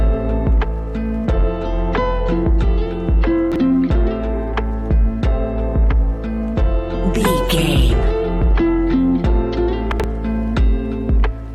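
Compressed frames were skipped at 2.86 s: about two frames, roughly 40 ms of audio, never reached the output, either missing from the stream or rejected by the decoder as damaged. With frames of 21.3 ms, the sound jumps forward by that whole-frame amount. Chunks out of order appear twice. From 3.52 to 3.60 s, a 40 ms block of audio was delivered or written one chunk late, so it plays after material that should have followed it. From 9.92 to 10.04 s, another 40 ms block arrives two chunks late. Nothing is dropped in either case, but the shuffled sequence creates three abrupt joins each time, heard as a brief jumbled stutter.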